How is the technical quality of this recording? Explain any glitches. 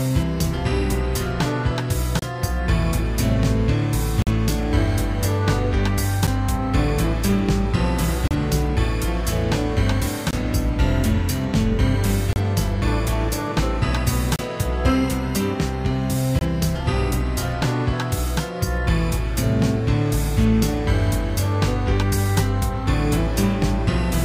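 The recording has one recurring glitch, a gap between stream segments, heard as eight brief hard-edged dropouts roughly every 2 seconds. They fall at 2.19–2.22 s (28.5 ms), 4.22–4.27 s (46.8 ms), 6.27 s (7.9 ms), 8.28–8.31 s (31.4 ms), 10.31–10.33 s (21.2 ms), 12.33–12.36 s (31.0 ms), 14.36–14.39 s (29.2 ms) and 16.39–16.41 s (22.8 ms). The stream arrives in 2-second chunks whose timestamps don't quite meet, so the player pads each seam with silence. Nothing is lost, but each gap stretches the timeline slightly and cuts the sound abruptly.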